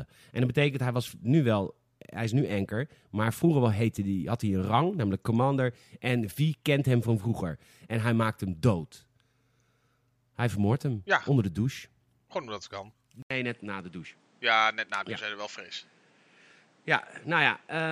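At 13.22 s the speech cuts out for 80 ms. When it returns, it stays changed to the end, at 17.92 s. Nothing above 10 kHz comes through, so the top end sounds dull and boxy. The level drops by roughly 5 dB. A new, different background noise sits a few tens of decibels below the speech. The likely cause is an input switched to a poorer device, with its own narrower band, tone and noise.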